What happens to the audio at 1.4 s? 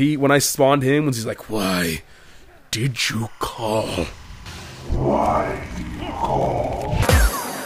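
Nothing goes wrong at 1.4 s: the audio plays through that moment intact, with no audible fault.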